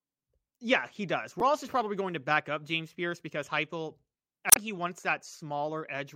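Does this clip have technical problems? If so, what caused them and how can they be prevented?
Yes. A brief glitch cuts through the speech twice: from 1.39 to 1.42 s, between "yeah he does" and "is probably going to", and again from 4.48 to 4.57 s, just before "he wants". Both come from damaged data in a compressed stream. Bytes in those stretches of the encoded file were corrupted, so the decoder misread the affected frames and lost sync until it found the next valid frame header. To prevent it, use checksummed, error-checked storage and transfer, and verify the file's integrity before playback.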